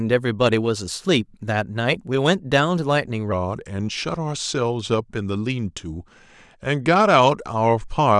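From 3.32 s to the end at 8.19 s, playback likely ran against the wrong clock, at 0.888 times the recorded speed. This section at the wrong speed drops the speech by about two semitones, so it abruptly turns deeper and slower.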